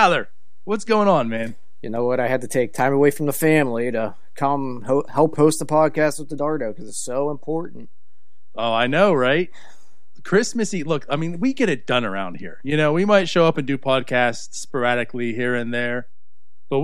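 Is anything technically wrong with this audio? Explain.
Yes. A DC offset runs through the whole speech clip, shifting the waveform by about -28 dBFS. Unlike hum or rumble, it is inaudible: steady energy at 0 Hz that quietly eats headroom.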